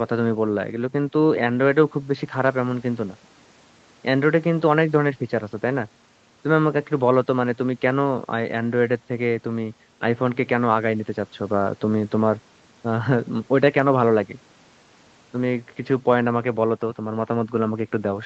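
Nothing stood out on listening to this speech, which has the band-limited, call-like character of audio carried over a call connection with nothing above about 8 kHz.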